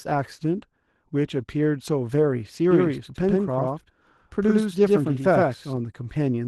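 Muffled, slightly hoarse and faintly robotic speech runs through the whole recording, and the damage is plainly audible. Vowels have a coarse, buzzy grain. This is Opus voice compression at 16 kbps in hybrid mode. The linear-prediction layer carries everything up to 8 kHz with a crudely quantised excitation, and a sparse transform layer fills in the highs in 20 ms frames. From 2.71 s to 5.77 s a second copy of the speech appears about a tenth of a second behind the first, at roughly the same loudness. Every syllable lands twice with a hard, slapback stutter, and the echo has no decay tail or room colour. It cuts in and out abruptly at those two times. This is a doubled audio track, most likely the same signal being picked up again through a slower path and mixed back in out of step.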